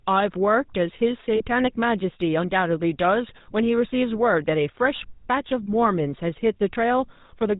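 From start to finish the speech carries the character of the GSM full-rate codec. Nothing above 4 kHz survives, so the sound is dull and band-limited. The excitation is rebuilt from a sparse, regularly spaced pulse train driving a vocal-tract filter, which gives a plainly audible buzzy, gravelly roughness that grows harsher on higher-pitched passages. The roughness and bandwidth fit the 13 kbps full-rate coder.

At 1.36 s there are lost GSM frames for about 40 ms, until 1.42 s. That duration points to two consecutive 20 ms frames. The decoder fills the gap by repeating the last good frame's parameters, so the sound is held as a brief rough, metallic ring instead of a clean dropout. A second loss at 4.96 s lasts 20 ms, fitting a single frame, and produces a shorter version of the same metallic smear.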